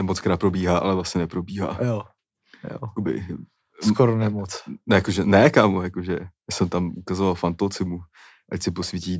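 No technical faults are audible anywhere in the speech.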